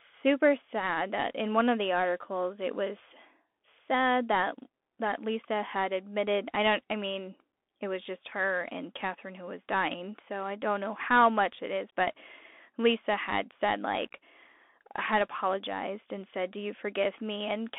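A speech clip carrying Bluetooth CVSD headset codec damage throughout, plainly audible. The band is confined to roughly 250 Hz to 3.5 kHz, which fits a 64 kbps one-bit delta stream. Its adaptive step lags fast high-frequency peaks, so sibilants turn scratchy over a granular hiss.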